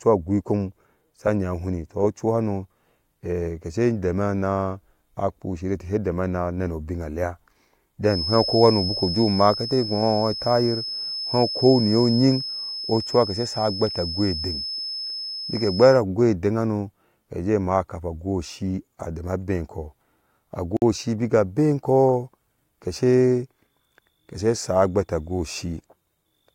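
From 8.01 s to 16.04 s a feedback whistle sits behind the speech: a thin, steady tone at 5.2 kHz, roughly 10 dB below the speech, swelling and fading slowly in level. The likely cause is a loudspeaker-to-microphone loop held right at its gain limit, so the tone persists without building into a howl. Unlike an electrical hum or interference tone, it sits at a single high pitch and drifts in level.

From 20.77 s to 20.82 s a gap at a join of encoded pieces cuts a 52 ms silence into continuous speech. Two separately encoded segments were spliced without trimming, so the encoder's start-up delay and final-frame padding remain as dead air. The edges are smeared by the codec, and the speech resumes exactly where it stopped. That distinguishes it from a packet-loss dropout, where the missing sound is skipped or concealed rather than inserted as silence.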